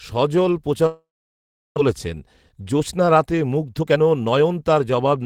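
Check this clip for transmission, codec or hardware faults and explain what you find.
Two transmission faults are present, both network related.

From 0.86 to 1.79 s there is a long network dropout, likely caused by a run of packets failing to arrive. The receiver concealed the gap by stretching the last received sound into a fading buzz, which dies away to near silence for about 0.7 s of the 0.9 s span. Roughly half a second of speech is simply gone, and when audio resumes it skips ahead, leaving the stream running about 0.4 s later than before.

From 1.87 to 5.18 s a jitter buffer speed-up follows. With that extra delay now queued, the receiver trims it back by repeatedly cutting out short pitch-period-sized slices, dropping around 0.4 s in total. Playback runs at roughly 111% of normal speed while pitch stays unchanged, so the speech sounds hurried through to near the end.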